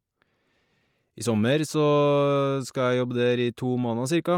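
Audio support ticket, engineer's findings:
Bluetooth LC3 compression, throughout the 4.4 s of speech. Plainly audible grainy, breathy edge on the top end, upper spectrum sounding partly noise-filled rather than real detail. Likely the LC3 codec: sparse high bins zeroed and replaced with noise fill. Band still runs to about 20.3 kHz, so not band-limited. Artefact pattern fits 10 ms frames at around 48 kbps.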